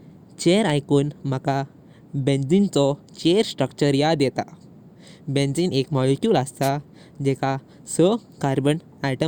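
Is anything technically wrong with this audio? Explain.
Yes. At 6.62 to 6.70 s, a wireless microphone noise hit: the FM radio link fades as reflections cancel, so receiver noise surges into a brief swish of static. Unlike a digital dropout, the sound is masked by hiss rather than cut to silence.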